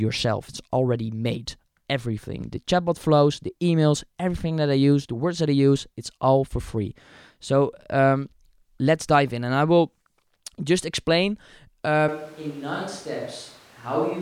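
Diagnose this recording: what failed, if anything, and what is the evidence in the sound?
From 12.09 s to the end, speech turns hollow and roomy, loses bass and drops about 10 dB. Likely a switch to a distant microphone.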